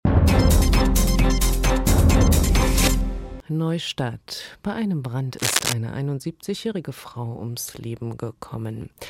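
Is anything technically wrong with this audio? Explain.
Yes. From 5.37 to 5.73 s there is cable scratch noise, likely from a worn connector or lead being moved, its contact resistance fluctuating and adding dense, uneven scratching only a few decibels below the sound.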